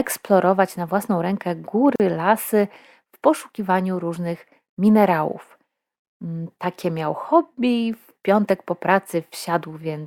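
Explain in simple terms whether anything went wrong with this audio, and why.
Something went wrong. The speech drops into brief silences at 1.96 s and 6.00 s, about 40 to 50 ms each. This is a gap at a join of encoded pieces.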